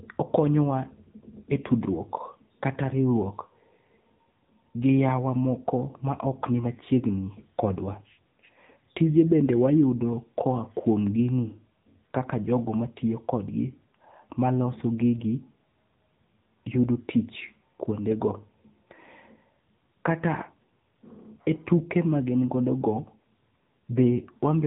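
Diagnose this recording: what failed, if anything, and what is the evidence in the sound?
The failure is at the codec stage: AMR narrowband mobile codec compression runs through the whole recording. Nothing above 3.8 kHz survives, and the speech has a plainly audible buzzy, synthetic edge, which fits a low AMR-NB mode near 8 kbps. There, few excitation pulses per subframe drive the vocal-tract model.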